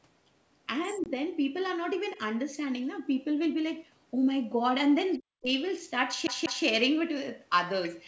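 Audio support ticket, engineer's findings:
Packet loss on the ADPCM call, 1.04–1.06 s: 20 ms dropped, which fits a couple of lost packets, filled with silence. Decoder predictor and step size lose sync, so a hard-edged gap is followed by briefly distorted speech.

Other side's voice leaking through, 5.12–5.18 s: likely residual echo the echo canceller missed at the loudspeaker-to-microphone path. A faint second voice, about 30 dB under the talker, in a short scrap.

Speech suppressed in double talk, 5.19–5.5 s: likely the echo canceller clamping both directions during overlap. Talker's voice dips by up to about 40 dB, affected for roughly 0.2 s in total.

CD stuck on one turn, 6.27–6.65 s: laser skipping back a track at the same scratch. A 0.19 s segment plays twice more with a short mute at each jump, giving a fast, even stutter.

Other side's voice leaking through, 7.84–7.98 s: likely the same echo canceller residue. 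Far-end voice bleeds in about 20 dB below the talker.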